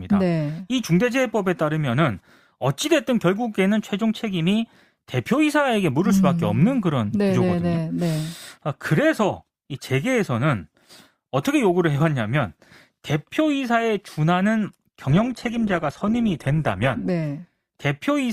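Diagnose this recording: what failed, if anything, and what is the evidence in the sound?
From 15.09 s to 17.09 s the speech abruptly loses its top end. Nothing remains above about 12.2 kHz, and the sound turns thinner, with no gap at either edge. This is an adaptive stream at a lower bitrate, a failure at the network stage. The connection slowed, so the player switched mid-stream to a cheaper encoding, which fits a step from about 64 kbit/s to 16 kbit/s Opus, and then switched back once throughput recovered.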